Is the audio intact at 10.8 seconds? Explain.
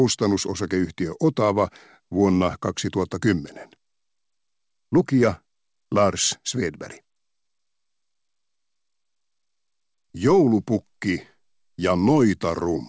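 Yes, the audio is intact at 10.8 seconds, with no dropout, glitch or distortion there, only the ordinary wideband call sound with nothing above about 8 kHz, which fits a G.722 codec.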